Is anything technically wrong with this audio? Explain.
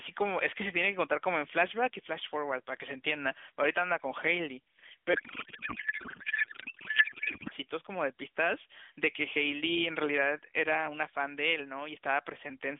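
Yes. From 5.14 to 7.52 s there's a codec payload misread: the AMR frames were packed octet-aligned but unpacked as bandwidth-efficient, so every field lands in the wrong place. The speech turns into garbled noise and warble that barely tracks it, all on top of the narrowband phone sound that tops out around 3.5 kHz.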